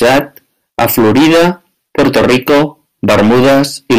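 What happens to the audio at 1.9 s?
At 1.9 s the speech is hard clipped, as it is across the whole clip: driven about 18 dB past the ceiling, roughly a fifth of samples hit the limit and flatten. The waveform shows squared-off peaks; the spectrogram shows smeared high harmonics, heard as harsh fuzz.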